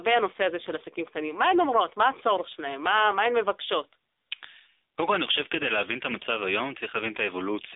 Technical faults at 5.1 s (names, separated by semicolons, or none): gain pumping; AMR narrowband mobile codec